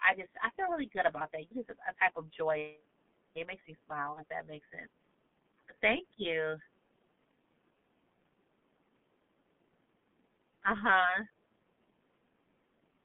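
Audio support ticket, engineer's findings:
Muffled, hoarse speech throughout, band roughly 150 Hz to 3.5 kHz, consonants smeared. Heavy G.723.1 codec damage: 30 ms frames and a slowly updated voice model. The coarseness fits a rate around 6.3 kbit/s.

Fading stretch at 4.13 to 4.24 s. VoIP packet loss concealed by the speech codec: decoder extrapolated its last pitch and filter with falling gain. The gap fits one lost 30 ms frame. The weak, distorted tail runs past the gap as the frame-to-frame state recovers.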